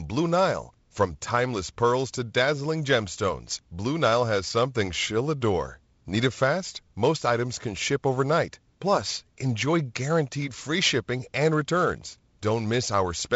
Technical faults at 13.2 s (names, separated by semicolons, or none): none